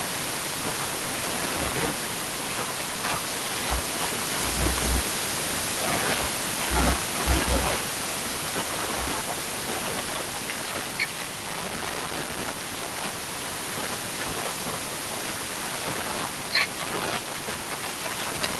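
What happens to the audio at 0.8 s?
At 0.8 s the speech comes through intact, with no dropout, glitch or other fault, just the steady sound of the Opus call path carrying it.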